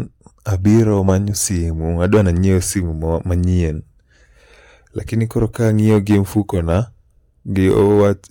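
Hard clipping flattens speech peaks at 0.67–1.45 s, 2.04–2.50 s, 5.42–6.77 s and 7.67–8.10 s, overdriven by about 3, 7, 5 and 4 dB. The stage can't pass those levels, so the squared tops add high harmonics, heard as crackly fuzz, harshest at 2.04 s.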